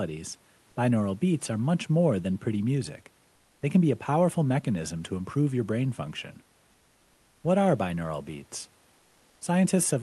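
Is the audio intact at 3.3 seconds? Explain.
Yes, the speech at 3.3 s is intact, with nothing breaking up the sound at that point beyond the ordinary character of the call path and the quiet room noise well below the speech.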